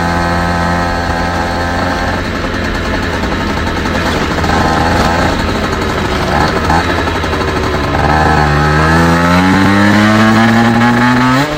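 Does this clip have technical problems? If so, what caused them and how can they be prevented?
Yes. Hard clipping runs through the whole clip: the signal is driven about 4 dB beyond what one stage can pass, so the tallest peaks are sliced flat. Only a small share of the audio, around one or two percent, goes over, so it is heard as brief crackle on the loudest moments rather than constant fuzz. Unlike soft clipping or limiting, the flat tops add sharp, high harmonics instead of a rounded thickening. It is prevented by lowering gain before the overloaded stage so peaks keep several decibels of headroom.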